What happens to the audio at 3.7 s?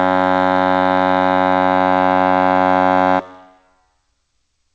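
At 3.7 s the music plays through intact, with nothing breaking into it, only the steady top-end limit around 8 kHz that the G.722 call path imposes throughout.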